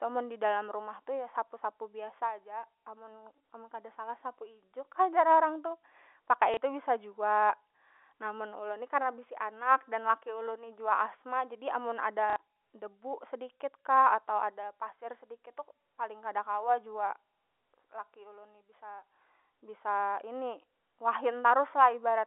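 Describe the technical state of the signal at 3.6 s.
At 3.6 s the speech is intact, carried cleanly through G.711 telephone coding with its usual narrow telephone band and no fault at that moment.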